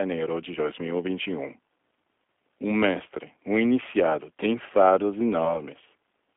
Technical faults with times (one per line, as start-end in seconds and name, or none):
0.00-6.36 G.729 codec
5.45-5.58 VoIP packet loss concealed by the speech codec